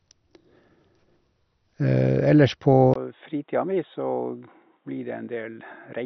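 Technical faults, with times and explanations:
throughout  MP2 compression. Nothing is heard above 6.2 kHz, and the speech sounds dull, gurgling and granular. Upper sub-bands seem switched off and the remaining ones coarsely quantised. The heavy damage likely comes from MP2 coding at a low rate, fitting around 48 kbps.
2.94 to 6.05 s  input switched to a poorer device. A 20 ms gap marks the switch. After it, nothing passes above 3.8 kHz, the speech drops roughly 10 dB and turns boxy, and a faint new noise floor appears. A different, narrower microphone likely took over.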